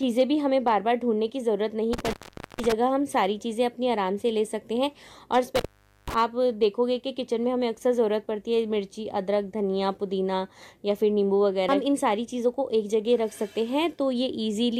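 Intermittent contact at 1.93–2.72 s and 5.56–6.14 s: a loose connection opens for about 0.46 s and 0.43 s. The sound drops to faint hiss between crackles. On a waveform this looks like a collapsed gap bordered by spikes, and on a spectrogram like a near-empty gap with vertical streaks at each edge.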